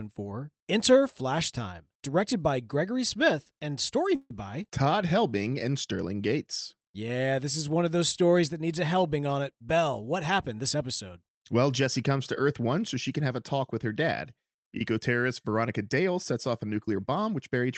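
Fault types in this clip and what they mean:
Call audio freeze: Packets were likely held up in transit, draining the jitter buffer. From 4.15 to 4.31 s, just after "and story", the last sound is stretched into a fading buzz ending in about 30 ms of silence. Nothing is lost, but everything after runs 147 ms late.
Jitter buffer speed-up: Excess audio had built up in the buffer, so the receiver trimmed repeated pitch-period slices to reduce delay. From 16.63 to 17.65 s, after "sets off a", the speech plays at 108% speed with unchanged pitch, losing about a tenth of a second and sounding hurried.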